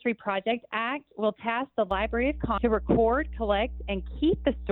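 From 1.91 s to the end, a steady low tone at 60 Hz sits under the sound, fairly loud and not far below it. This is mains hum: a ground loop or nearby transformer lets the 60 Hz power line leak into the signal path.

At 2.58 s a brief glitch cuts through. That is damaged data in a compressed stream: the decoder hit corrupted bytes, misread the frame there, lost sync and jumped ahead to the next valid frame header.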